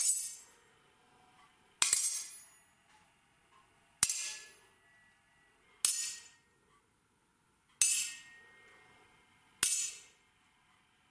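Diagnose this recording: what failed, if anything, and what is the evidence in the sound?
Between 1.79 and 5.63 s there's a wrong sample rate fault at the playback stage. The sound drags and drops roughly one and a half semitones, running at 0.92 speed, which fits 24 kHz material clocked out at 22 kHz with no resampling.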